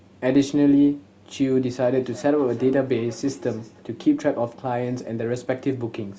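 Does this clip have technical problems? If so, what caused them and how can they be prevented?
Yes. From 1.84 to 3.90 s the speech comes back as a faint echo, peaking about 24 dB below the voice and repeating roughly every third of a second. This is feedback echo between two devices: two devices in one room join the same call, one plays back what the other's microphone sent, and that microphone picks it up again. Neither device's echo canceller removes sound played by the other device. To prevent it, join from only one device per room, or mute the second device's microphone and speaker.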